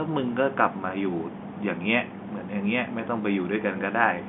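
No technical faults are audible.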